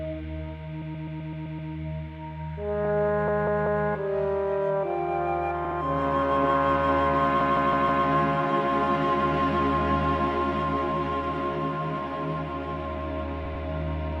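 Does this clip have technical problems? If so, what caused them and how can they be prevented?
Yes, repeated frames: the decoder replays a short block, heard as stutters at 0.82–1.71 s, 3.28–3.86 s, 5.65–5.78 s, 7.41–8.05 s and 13.46–13.65 s. Blocks run 64–192 ms, repeating two to seven extra times, adding about 2.4 s. Validate frame sequence numbers and drop duplicates before decoding.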